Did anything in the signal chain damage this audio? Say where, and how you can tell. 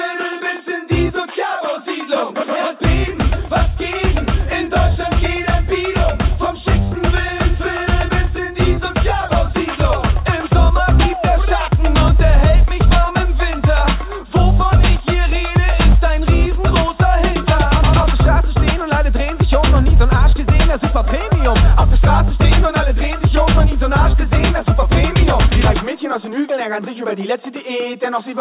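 No, nothing in the chain damaged this audio. It came through a WebRTC call path, and the band stops at 4 kHz, which fits a narrowband call codec such as G.711 mu-law.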